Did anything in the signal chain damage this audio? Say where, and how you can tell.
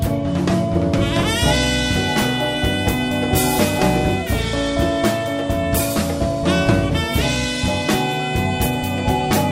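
No, nothing in the signal chain damaged this audio, so there is no stage or moment to point to.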